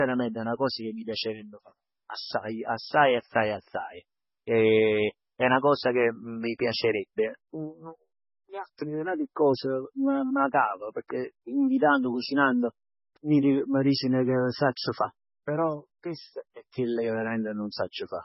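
Throughout the speech, nothing is heard above 5.6 kHz. It sounds watery. This is likely heavy MP3 compression, fitting a bitrate near 16 kbps.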